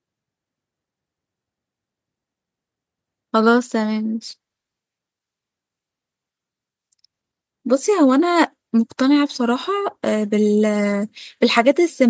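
The speech shows no technical faults, and the only processing audible is a call's microphone chain, whose high-pass filter trims the lowest bass and whose bandwidth leaves nothing above 8 kHz, both normal for that path.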